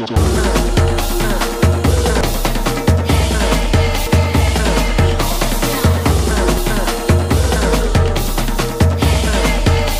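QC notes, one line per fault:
0.16, 2.21, 4.07 and 6.57 s: damaged data in a compressed stream. Each time a brief chirp, squawk, click or short hole cuts across the sound because corrupted bytes leave the decoder misreading a frame and losing sync until it finds the next valid frame header. On a spectrogram each event is a thin vertical smear of broadband or oddly tonal energy that does not match its surroundings. In the waveform it appears as a short burst or abrupt discontinuity.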